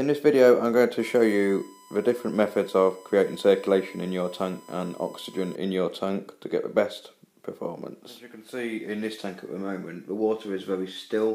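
A steady, fixed-pitch whine at 1 kHz sits under the sound from 1.00 to 5.56 s, roughly 25 dB below the signal. This is USB whine: the bus's 1 ms frame timing draws current in pulses that leak into the audio through power or ground.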